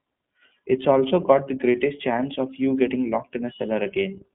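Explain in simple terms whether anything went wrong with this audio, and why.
The whole recording, from start to finish, has passed through the iLBC codec, a narrowband phone-call codec. It throws away everything above about 3.8 kHz, so the speech sounds thin and boxy, like an old phone line. What sets it apart from simple telephone filtering is a slightly rough, synthetic grain. The codec rebuilds the voice in 30 ms chunks, each coded separately, and that leaves a rough edge you can plainly hear.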